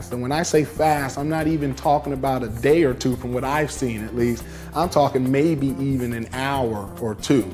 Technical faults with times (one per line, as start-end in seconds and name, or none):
none